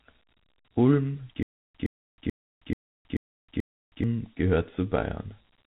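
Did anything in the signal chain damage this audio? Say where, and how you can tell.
Yes. The codec stage left damage through the whole clip. The speech carries the marks of Dialogic VOX ADPCM: nothing reaches above 3.9 kHz, and a gritty hiss rides on the speech and swells and fades with it. At 32 kbps with 4 bits per sample, that fits an 8,000-sample-per-second VOX file. A plain low-pass filter or a clean telephone band limit would not add that grain. What gives ADPCM away is that the noise follows the signal level, because the coder's adaptive step size sets how large its errors are.

Playback also added a stutter with silent gaps from 1.43 s to 4.04 s. The same 117 ms burst plays six times, with about 318 ms of digital silence after each one, so it repeats every 435 ms. The fragment repeats exactly and the gaps are true digital silence, not comfort noise or smeared concealment, so this is not network packet loss. 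The likely cause is a player or stream stalling and replaying its last buffer on each retry. The audio that should have played in that span is gone.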